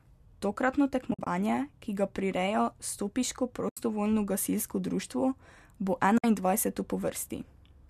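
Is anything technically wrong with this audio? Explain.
Yes. Three soft-edged gaps in the speech fade out and back in, at 1.11 to 1.27 s, 3.69 to 3.77 s just before "gasilsko društvo", and 6.18 to 6.24 s. This is AAC frame loss with muting. Frames went missing, and the decoder zeroed their spectrum, so the overlapping windows produce gentle holes rather than hard cuts. The first gap loses about 110 ms scattered over 160 ms, with the longest run around 50 ms. The other two lose 80 ms and 60 ms, which fits short frames of about 10 ms. The speech also has a faint graininess, likely from the low-delay AAC compression carrying the audio at 64 kbps.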